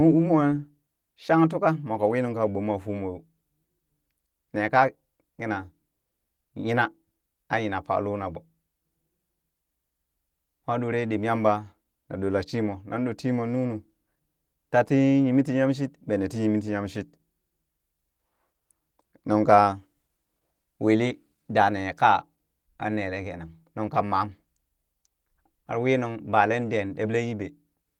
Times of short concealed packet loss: none

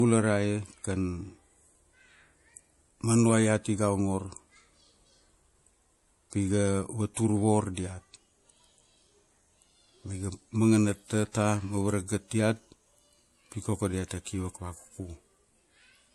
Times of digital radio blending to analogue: none

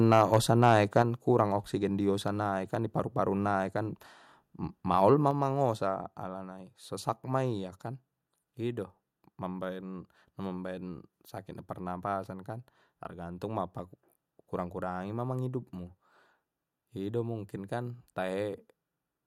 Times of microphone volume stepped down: 1.02, 5.31

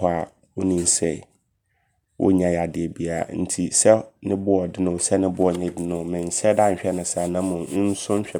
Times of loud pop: none

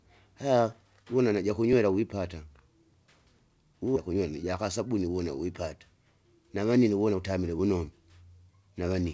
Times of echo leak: none

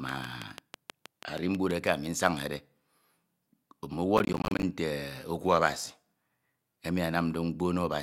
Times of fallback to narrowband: none

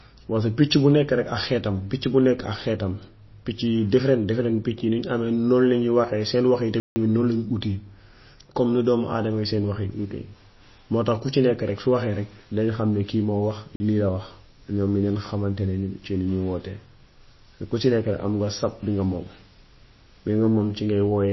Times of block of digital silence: 6.80-6.96, 13.76-13.80

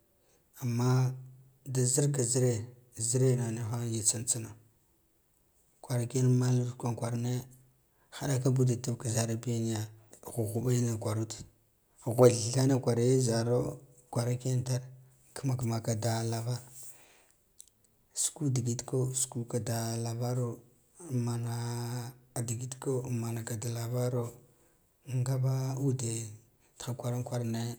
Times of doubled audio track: none

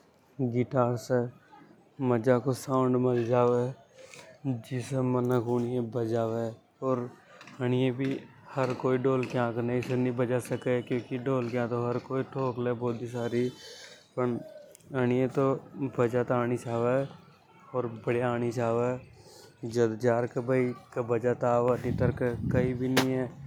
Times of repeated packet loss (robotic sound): none

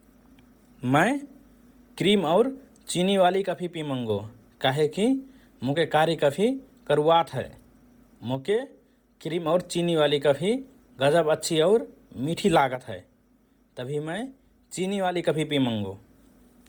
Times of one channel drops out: 3.46-4.09, 8.35-9.46, 12.75-15.15

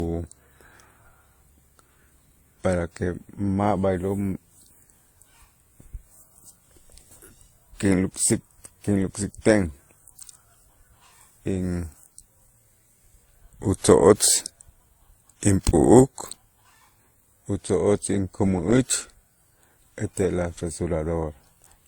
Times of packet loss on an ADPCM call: none

